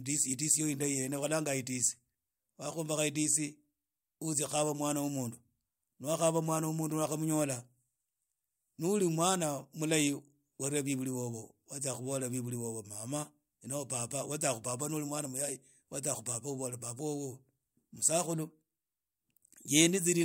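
No technical faults can be heard anywhere in this speech recording, which keeps a steady, unbroken signal throughout.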